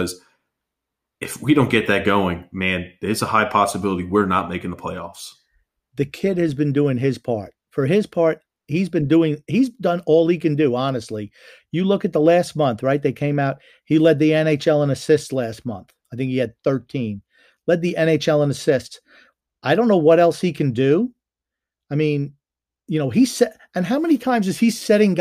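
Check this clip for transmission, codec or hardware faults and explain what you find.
No transmission, codec or hardware faults can be heard anywhere in this speech recording.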